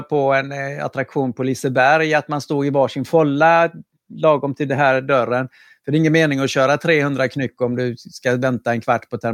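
No technical faults are audible.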